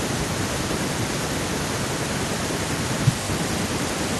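No technical faults can be heard anywhere in the recording.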